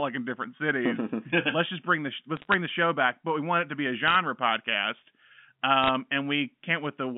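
Speech carried over what sounds like G.711 telephone coding, band-limited to roughly 200 Hz–3.5 kHz. There are three short bursts of bit errors on a digital phone line, at 2.37–2.54 s, 4.08–4.16 s and 5.83–5.89 s. Flipped bits corrupt single samples at a rate well under one percent, so you get sharp ticks and crackle sitting on top of the speech.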